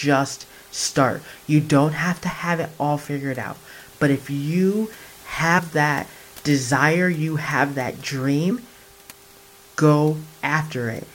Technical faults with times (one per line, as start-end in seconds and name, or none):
0.84 damaged data in a compressed stream
5.57 damaged data in a compressed stream
8.50 damaged data in a compressed stream